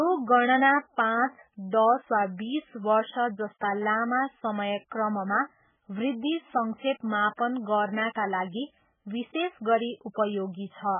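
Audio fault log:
Throughout, MP3 compression: the speech cuts off sharply at 3.5 kHz and sounds heavily watery and swirly as weak frequencies flicker between frames, likely from MP3 at a very low bitrate, fitting about 8 kbps. A spectrogram shows a flat 3.5 kHz ceiling with patchy, blocky gaps below.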